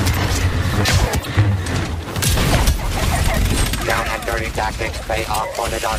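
At 1.22 to 1.26 s and again at 5.32 to 5.36 s, the audio breaks into a short chirp or squawk lasting about 40 ms. Both are damaged data in a compressed stream: some bytes in the encoded file were lost, zeroed or overwritten, so the decoder misread the affected frames, lost sync, and had to search for the next valid frame header before playback could continue. The garbled output during that search produces the blip.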